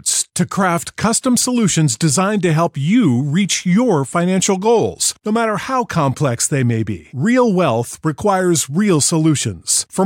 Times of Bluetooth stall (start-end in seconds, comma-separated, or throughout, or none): none